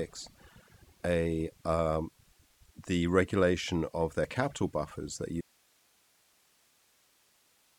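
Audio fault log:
throughout, overdone noise removal: the background is near-silent with twinkling specks, because an over-strong noise reducer pushes single frequency bands down whenever they approach its noise estimate, taking quiet speech detail with them. Spectrograms show scattered isolated dots and patchy, torn harmonics.
5.41 s to end, audio dropout to a faint residue: right after "their capital buffers that" the speech cuts off abruptly, leaving only hiss roughly 35 dB below it, likely from the signal being lost while the path after the break stayed live. The waveform collapses instantly to a thin flat band.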